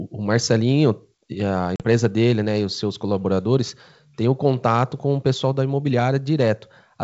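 Speech carried over a G.722 wideband link at 64 kbit/s has a packet loss dropout on the ADPCM call from 1.76 to 1.83 s. About 40 ms, a couple of packets, goes to silence, showing as a sharp-edged gap in the waveform and a blank vertical stripe on the spectrogram. Speech resumes with brief distortion while the decoder's predictor and step size realign with the sender's.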